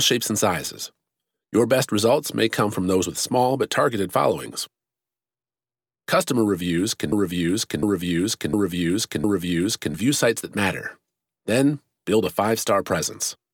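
The playback or streaming chain likely stalled in this speech clip and kept resending the last fragment it held, producing a broken-record loop from 7.12 s to 9.94 s. Right after "reviews can", a piece about 0.71 s long repeats exactly, back to back, four times, giving a stuttering, mechanical cycle. Whatever should have been heard in that span is lost, and normal sound resumes at "sites that".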